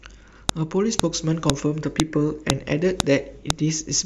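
Sharp clicks land at 0.49, 0.99, 1.50, 2.00, 2.50, 3.00 and 3.50 s in this speech, every half second: a file header played as audio, where each joined piece's leftover header bytes snap through.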